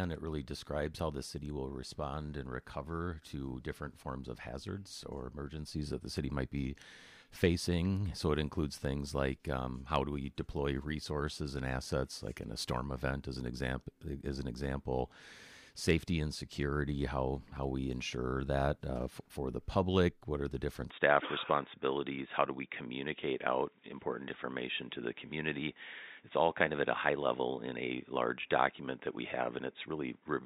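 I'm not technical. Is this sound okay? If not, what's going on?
No. At 20.90 s the recording likely switched over to a poorer microphone, an input switched to a poorer device, and it stays that way to the end. That second input can't pick up anything above about 3.8 kHz, so from that moment the sound turns dull and boxy, losing its crisp, airy top. There's no gap at the switch and the loudness stays about the same, so the change in tone is the giveaway.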